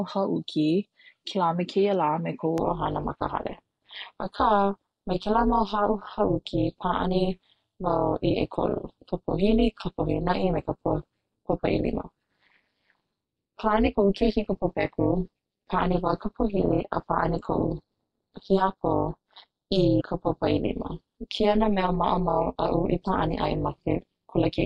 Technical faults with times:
2.58-24.65 overlap-add ripple
19.99-20.02 compressed frames skipped

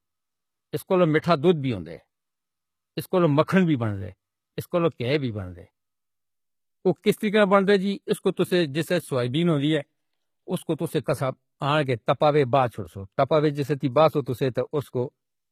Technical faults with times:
0.00-15.52 low-bitrate audio saved at a high bitrate

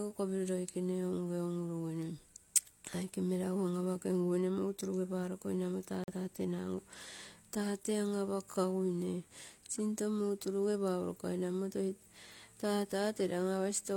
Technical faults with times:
6.04-6.15 corrupt frame muted

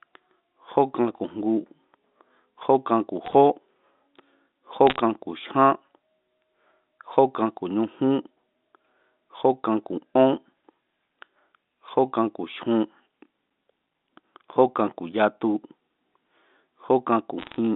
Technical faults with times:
3.26-3.33 bit errors on a digital phone line
4.87-4.99 bit errors on a digital phone line
17.39-17.56 bit errors on a digital phone line

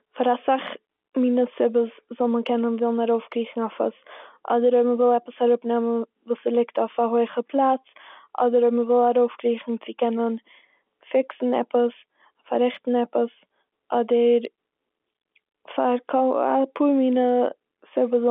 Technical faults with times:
none

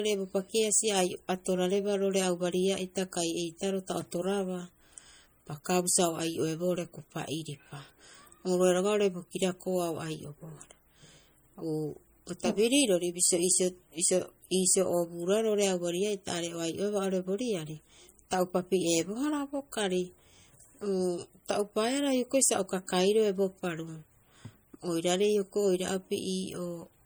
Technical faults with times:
0.00-27.05 MP3 compression

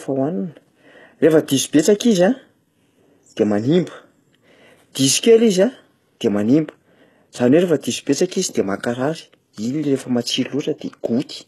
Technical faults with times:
0.00-11.47 HE-AAC compression

